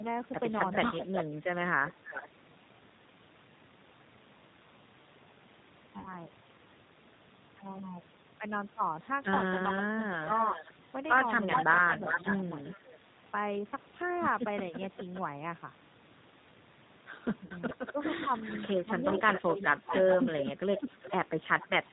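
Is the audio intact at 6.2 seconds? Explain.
No. The sound just before turns into a fading buzzy tone or coloured noise from 5.99 to 6.19 s. This is VoIP packet loss concealed by the speech codec: about 60 ms of data went missing, which fits three lost packets, and the decoder stretched its last pitch and filter while lowering the gain. At 6.2 s the sound is still recovering, weak or distorted. Throughout, a rough, slightly synthetic quality with nothing above 4 kHz points to the G.729 codec at 8 kbit/s, rebuilding the signal from a vocal tract model and sparse pulses.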